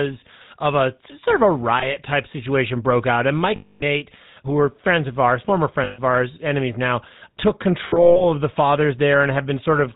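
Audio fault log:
Throughout: GSM full-rate codec. The speech has a buzzy, gravelly roughness and nothing above 4 kHz, consistent with 13 kbps full-rate GSM. The codec models the vocal tract and rebuilds its excitation from regularly spaced pulses, discarding two of every three samples.
1.80–1.86 s, 3.56–3.83 s, 5.84–5.99 s, 7.88–8.24 s: lost GSM frames. The decoder filled each gap by repeating the last good frame, producing a rough metallic ring. The gaps last 20 ms, 240 ms, 140 ms and, in the last span, 220 ms scattered over 320 ms with a longest run near 150 ms.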